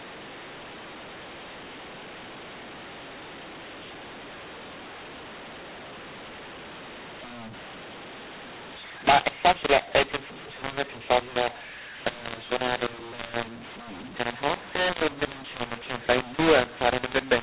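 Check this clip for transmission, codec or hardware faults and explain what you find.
There is one fault, present for the whole clip: mu-law and A-law mixed up. The speech was coded as G.711 A-law but decoded as mu-law, so each 8-bit code maps to the wrong level. Loud and soft samples come out scrambled and quiet samples are lifted well above silence. The result is harsh, distorted speech, with pauses filled by noise. On a waveform, the pauses show a thick noise floor instead of a flat line and the peaks look jagged. On a spectrogram, broadband distortion smears across the band. The underlying 8 kHz telephone coding is still visible as a hard cut-off at 4 kHz.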